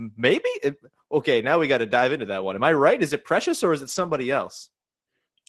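From 3.83 to 4.17 s, after "it precious or is", a lost packet rebuilt from error correction sounds rougher and noisier. Spectrogram harmonics smear, but the waveform shows no gap.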